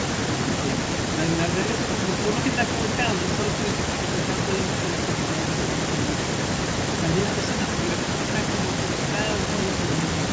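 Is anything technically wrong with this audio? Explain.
No, nothing is technically wrong with this audio.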